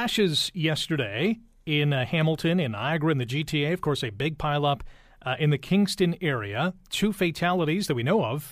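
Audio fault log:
No faults heard anywhere in the speech.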